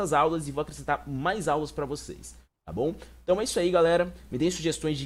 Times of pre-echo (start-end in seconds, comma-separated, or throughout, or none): none